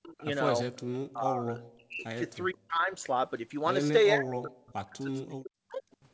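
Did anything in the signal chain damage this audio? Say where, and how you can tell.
Yes. Speech suppressed in double talk: the speech dips by up to about 40 dB at 0–0.21, 0.96–2.26, 2.52–2.92 and 4.15–5.83 s, likely the call's echo canceller ducking its own talker along with the loudspeaker echo during double talk.

Echo leak: faint delayed scraps, about 25–35 dB down, at 0.18–0.25 and 5.91–5.96 s, trailing by roughly 0.45–0.47 s. That's likely loudspeaker echo the canceller on the loudspeaker side missed.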